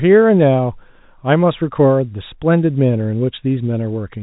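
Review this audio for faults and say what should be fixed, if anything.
Nothing stood out on listening to this telephone-band speech, so there is nothing here that needs fixing.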